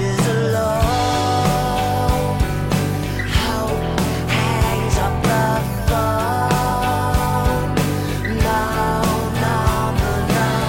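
No technical faults are audible.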